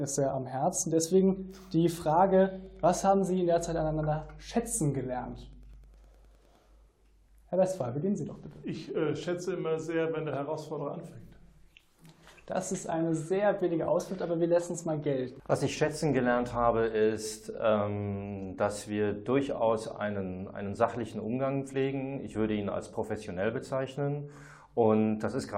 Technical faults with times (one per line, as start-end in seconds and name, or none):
2.53-6.57 Wi-Fi interference